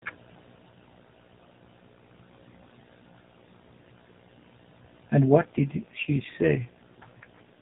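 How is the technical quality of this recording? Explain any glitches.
An AMR rate drop affects the final stretch of this speech recording, from 5.36 s through to the end at 7.61 s. Before that, the sound has the narrow band of the AMR narrowband mobile codec, with nothing above 4 kHz and only light coding roughness, which fits its top 12.2 kbps mode.

At 5.36 s the codec is switched to a lower rate, and the sound points to the 5.9 kbps mode. On a weakening radio link, the network frees bits from the speech model and spends them on error protection. The bandwidth does not change and nothing drops out, but with fewer pulses describing each frame the voice turns audibly buzzier and more synthetic, and it stays that way until the clip ends.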